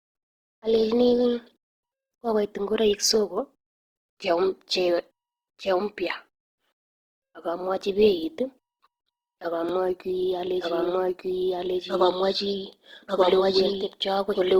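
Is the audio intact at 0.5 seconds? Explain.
No. At 0.5 seconds the speech already sounds rough and grainy, with a noisy, sandpapery texture on voiced sounds that runs through the whole clip. This is likely Opus compression in its music (CELT) mode, starved of bits at what sounds like about 16 kbps. The encoder keeps each band's energy but fills the detail with folded or noise-like content. The bandwidth stays full, reaching about 20.2 kHz.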